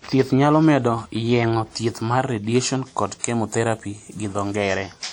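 Throughout the speech, the audio has likely been through WMA compression at a low rate, with damage that fits a 48 kbps stream. The transform encoder quantised each long block coarsely, so its noise smears across tens of milliseconds and weak spectral lines drop out. The result is plainly audible: a ringing, washy texture and a hiss that swells and fades with the signal, with nothing above 20 kHz.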